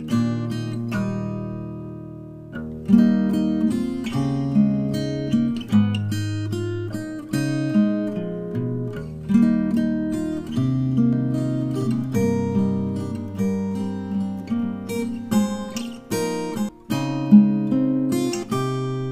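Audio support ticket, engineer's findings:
Doubled audio track, 11.13 to 16.69 s. Second full-band copy trails the original by about 1.5 s, roughly 5 dB down. No decay or room colouring on the copy, and it cuts in and out abruptly at both ends. Likely cause: a slower second capture path or an edit holding two out-of-step copies of the same material.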